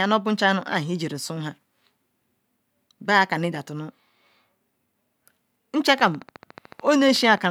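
From 6.00 to 7.46 s a train of clicks runs at a steady 13.7 per second, about twenty ticks, each roughly as loud as the speech, most likely interference or a faulty connection. The waveform shows evenly spaced, closely similar spikes; the spectrogram shows thin vertical broadband lines.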